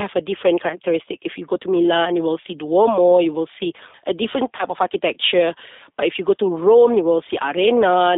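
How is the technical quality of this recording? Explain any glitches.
Technical quality is limited by low-bitrate speech coding throughout, plus one short dropout.

The G.729 codec's 8 kbit/s coding is plainly audible: the speech band is confined to roughly 200 Hz to 3.7 kHz, and the voice sounds slightly rough and synthetic.

From 4.57 to 4.64 s, VoIP packet loss concealed by the speech codec covers a 20 ms gap, fitting two frames. The decoder extrapolated a fading fill, and the voice sounds weak or distorted while it recovers.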